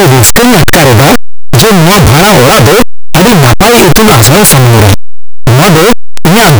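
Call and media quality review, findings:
Harsh distortion across the whole speech clip. Quiet passages come through as loud as the rest. Likely signed and unsigned mixed up on an 8-bit path: top bit flipped, so every zero crossing jumps rail to rail.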